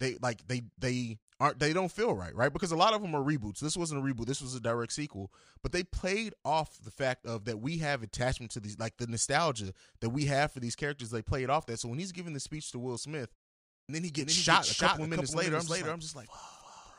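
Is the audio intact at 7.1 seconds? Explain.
Yes, the audio at 7.1 seconds is intact, with no fault present at that moment.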